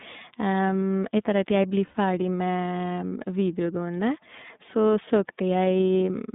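Throughout, the speech has passed through the iLBC codec, whose 30 ms frame mode points to roughly 13 kbps. Nothing outside about 150 Hz to 3.7 kHz survives, so the sound is narrow and muffled, and the independent frame-by-frame excitation coding leaves a plainly audible rough, synthetic edge.

From 1.86 s to 1.95 s, just after "at jeg bli", there are lost iLBC frames. About 90 ms of audio is missing, which fits three consecutive 30 ms frames. The decoder fills the gap by repeating the last pitch cycle blended with noise, so a brief held, buzzy vowel replaces the speech before normal sound returns almost immediately.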